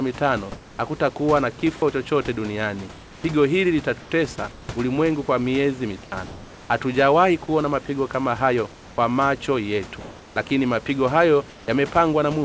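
At 1.60 to 1.62 s a sliver of sound is lost: for 20 ms it gives way to flat, steady noise. This is sound dropped by the voice detector, likely because it briefly misread that stretch as background. On a spectrogram the speech energy is cut by a thin column of smooth, evenly spread noise, all below 8 kHz as on the rest of the call path.

From 2.92 to 3.24 s, and again at 4.00 to 4.68, 6.04 to 6.12, 8.72 to 8.98, 10.00 to 10.50 and 11.50 to 11.68 s, comfort noise likely replaces the background in pauses. The real room noise becomes a featureless hiss, about 2 to 4 dB quieter. On a spectrogram these pauses lose their grain and flicker, showing a uniform band. On the waveform the floor steps slightly down.

At 10.48 to 10.50 s, right at the end of one of those pauses, the voice detector likely drops another 10 ms of sound.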